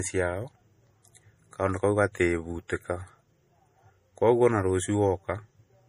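Throughout the speech, nothing reaches above 15.2 kHz. A spectrogram shows a flat, hard ceiling at that frequency across the whole clip. The cause is likely low-bitrate audio saved at a high bitrate: an MP3 pass that fits roughly 40 kbit/s, re-saved far higher, which cannot restore the discarded band.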